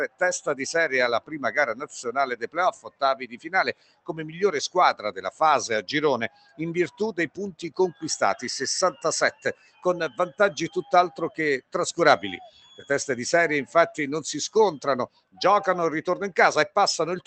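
The sound pumps and thins throughout, with held tones and decaying tails sinking by something like 10 dB while attacks punch through. That is a speech-oriented noise suppressor applied to music or sounds, mistaking sustained material and ambience for noise. The sound cut by the noise suppressor is clearest at 0.08–0.53 s, 1.2–4.12 s, 4.94–5.21 s, 6.29–8.03 s, 8.93–11.74 s, 12.45–12.9 s and 15.07–15.41 s. In these spans, tails are chopped short and levels dip by up to about 17 dB, with the shallowest of these dips reaching about 13 dB at 4.94 s and about 10 dB at 12.45 s. Beneath this sits a WebRTC call path with Opus, whose coding texture and top end ending near 8 kHz point to a low-bitrate call setting.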